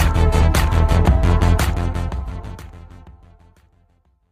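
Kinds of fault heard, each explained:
skip ahead: At about 0.42 s the playback jumps forward, dropping roughly half a second of audio that was already queued behind it. Nothing fills the hole, so the sound on either side is butted together almost directly, with no silence or concealment. The effect is an abrupt discontinuity, as if a piece of the recording had been cut out, and the overall delay shrinks by around half a second at that point.
jitter buffer speed-up: From 0.54 s to about 4.0 s the receiver trims small pieces of one or a few pitch periods, repeatedly, to drain excess buffered audio. The sound runs at 108% speed with its pitch unchanged, so it comes across as slightly hurried and compressed in time, with roughly 0.3 s removed in total across that stretch. The fade-out starting around 1.5 s proceeds smoothly while this is going on.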